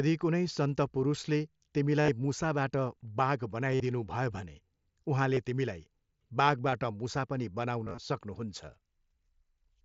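Speech, marked by concealed Bluetooth headset packet loss at 2.01–2.08 s, 3.72–3.80 s, 5.34–5.37 s, 6.71 s and 7.84–7.98 s. The receiver fills each missing packet by repeating the best-matching stretch of recent waveform. The longer runs, about 45 and 53 ms near 2.0 and 3.7 s, become a buzzy tone held at full level with a slight warble as real audio resumes, where a plain dropout would leave silence.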